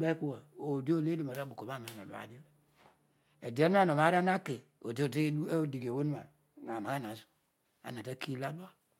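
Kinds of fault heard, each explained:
Channel delay (comb filtering): from about 2.8 to 5.0 s one side lags by a hair, which fits a one-sample offset. Summed to mono, the cancellation lands right at the top, first notch around 20 kHz, so the speech just loses some air.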